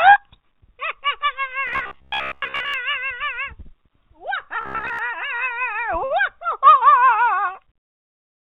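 From 1.67 to 2.74 s and again from 4.61 to 4.99 s, audio likely arrived too seldom, so short buffers were replayed in place of fresh sound. This robotic sound from repeated short buffers imposes a rigid 66.8 Hz buzz, pointing to buffers of about 15 ms, with most of the audio in those spans being repeats.

At 6.05 to 6.12 s, a late packet emptied the jitter buffer, and the receiver held the last sound for 56 ms before resuming from the same place. This short stall from a late packet adds 56 ms of delay but loses no audio.

Throughout, the WebRTC call path's telephone-band coding, consistent with G.711 mu-law, leaves nothing above 4 kHz.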